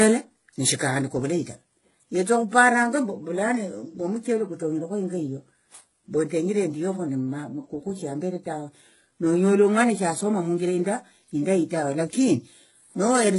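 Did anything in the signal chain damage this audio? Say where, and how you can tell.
Yes, at the codec stage. Across the whole speech clip nothing sits above 11.1 kHz, and two distinct compression textures are heard stacked. That likely points to transcoding between lossy codecs: a low-rate HE-AAC encode re-encoded as WMA, which preserved the earlier artefacts and added its own.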